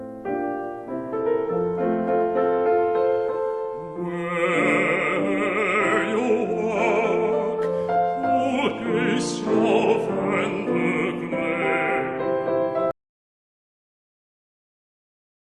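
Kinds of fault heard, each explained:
Audio dropout to silence: the input signal was lost, likely through a disconnected device, failed link or stray mute, while recording carried on writing zeros. From 12.91 s the sound cuts off mid-flow into silence, with no room tone, and never returns.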